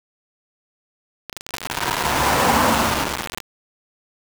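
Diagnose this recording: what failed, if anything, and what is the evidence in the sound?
Grainy, gritty distortion runs through the whole clip and moves with the sound itself. Quiet passages break up or sputter. The error is nearly as loud as the signal. The likely cause is low bit depth without dither: a sample-format conversion rounded down to 3 bits.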